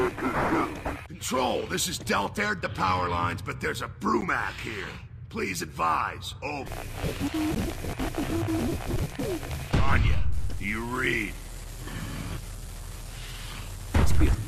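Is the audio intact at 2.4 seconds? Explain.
No. There is damaged data in a compressed stream from 2.37 to 2.39 s, just before the 2.4 s mark. Part of the compressed data there was lost, zeroed, overwritten or mixed with other data. The decoder misreads or rejects the affected frames. It loses sync and hunts for the next valid frame header. The result is a brief break in the sound, heard as a chirp, squawk, click or short gap.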